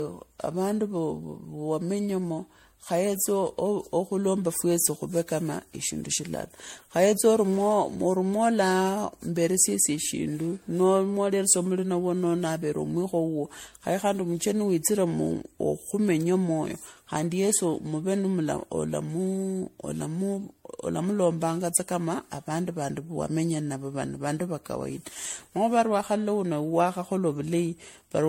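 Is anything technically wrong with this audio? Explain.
Yes. Generation loss runs through the whole recording: the speech was likely decoded and re-encoded with MP3 around seven times, and the band stopping at 16.5 kHz fits a 64 kbit/s chain. Each pass quantises again on a shifted frame grid, so coding noise and spectral gaps pile up instead of staying at one pass's level. The result sounds swirly, smeared and hollow, more degraded than that bitrate alone would give, with consonant attacks blurred.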